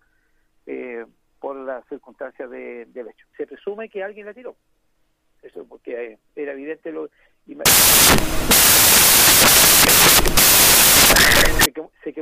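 At 7.66 s the audio collapses into loud, harsh broadband noise that lasts four seconds, until 11.66 s. That's samples built from the wrong bytes: the reader has misassembled each sample, whether by a byte offset, swapped byte order or the wrong alignment, so the jittery low-order bits end up driving the top of every value. The result is loud broadband noise.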